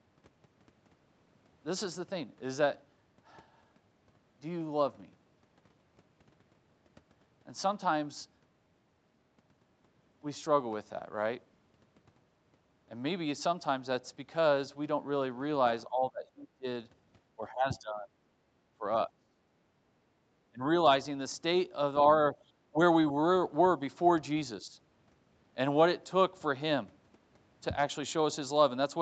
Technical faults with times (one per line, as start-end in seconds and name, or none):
15.87-16.66 speech suppressed in double talk
17.37-18.14 speech suppressed in double talk
18.79-19.38 speech suppressed in double talk
20.52-20.63 speech suppressed in double talk
22.36-22.41 background gated by the echo canceller
22.71-22.79 speech suppressed in double talk
24.62-24.77 speech suppressed in double talk